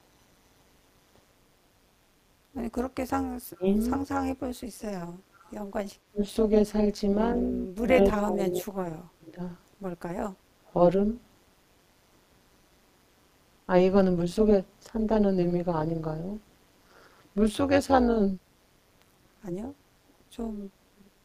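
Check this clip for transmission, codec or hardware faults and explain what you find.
The recording has four separate faults: a constant frame-rate buzz, plus echo-canceller problems that cut the talker, dip the room sound and let faint echoes through.

Overlap-add ripple runs through the whole clip as a metallic buzz with extra tones around the voice, with the level swinging by about 11 dB around 200 times a second. The audio was split into windowed frames and rejoined with overlaps that don't sum to a steady gain, so every frame boundary pulses.

Speech suppressed in double talk appears at 3.56–3.66 s, 6.1–6.26 s and 7.55–9.39 s. The voice drops out deeply, by roughly 25 to 35 dB, with the longest gap lasting about one and a half seconds. This is likely an echo canceller confusing the local talker with loudspeaker echo while both sides spoke at once, and ducking everything.

Background gated by the echo canceller occurs from 5.14 to 5.49 s. 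The room tone sinks by about 13 dB for under half a second and then recovers. The canceller clamped the microphone down hard while the loudspeaker played, then released it.

Echo leak shows up at 6.21–6.32 s, 10.66–10.73 s, 20.08–20.13 s and 21.06–21.1 s as faint scraps of voice trailing 212 ms behind, roughly 30 to 40 dB below the speech. These are likely loudspeaker pickup at the far end that its canceller failed to remove and sent back.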